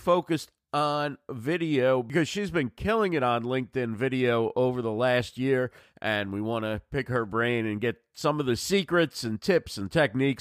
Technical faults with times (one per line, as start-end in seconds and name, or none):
none